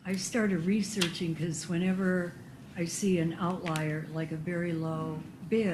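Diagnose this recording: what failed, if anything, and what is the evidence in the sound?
No stage of the chain shows a failure: the signal stays continuous throughout, and nothing in the sound points to trouble anywhere between capture and playback.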